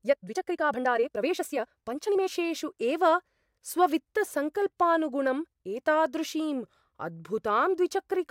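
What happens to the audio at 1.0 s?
At 1.0 s the speech sounds rushed, running about 1.73 times fast with unchanged pitch from 0.0 to 2.28 s, likely a time-stretched section where short pieces were dropped.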